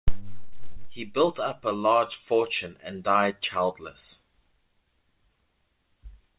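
At 0.72 to 0.79 s the speech briefly smears and wobbles. This is short concealed packet loss: about 40 ms never arrived, so the receiver extended the preceding sound and then blended back. The call path's cut-off at 4 kHz points to a narrowband telephone codec such as G.711 mu-law.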